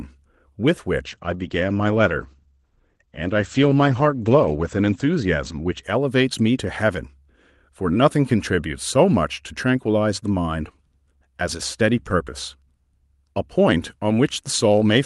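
From about 1.08 to 6.55 s there's a call bitrate drop. The audio turns rough and muffled, with the top end narrowing to around 8 kHz, which fits Opus falling from about 48 kbps to about 13 kbps, bottoming out for nearly 3.7 s before it recovers.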